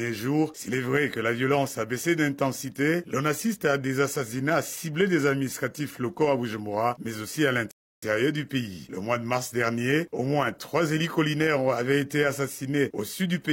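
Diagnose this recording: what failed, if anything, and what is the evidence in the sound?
Rebuffering stall in playback: the player ran dry, went silent from 7.71 to 8.03 s, then resumed exactly where it stopped. Unlike a dropout, nothing is lost.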